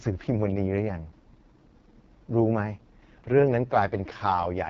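Speech clip, passed throughout through an AMR wideband (HD Voice) codec at a very low rate, consistent with 6.6 kbit/s, leaving the voice rough and raspy, with nothing above 7.3 kHz.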